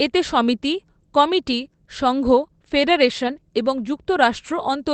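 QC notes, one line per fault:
3.23–3.29 s, lost packet rebuilt from error correction: a brief patch of rougher, grainier, noisier sound with no gap or dropout, about 40 ms of it rebuilt, consistent with two separate 20 ms packets going missing. Each lost packet was replaced from the low-bitrate backup copy carried in the following packet by Opus in-band error correction, so playback stayed continuous but those frames lost detail and picked up extra coding noise.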